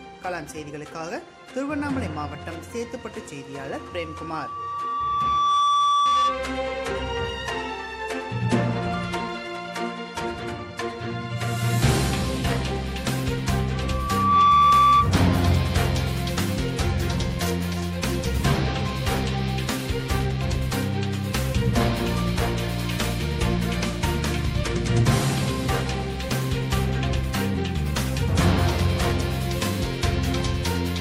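At 3.71 s a loudspeaker feedback squeal starts: a steady 1.2 kHz tone swells over about two seconds until it sits a little above the sound, then stops at 6.49 s. It returns at 13.73 s, rising faster and louder before ending at 15.13 s. The microphone is hearing its own loudspeaker, and the loop's gain at 1.2 kHz exceeds one. The fixed pitch and self-sustaining growth set it apart from a recorded tone or hum.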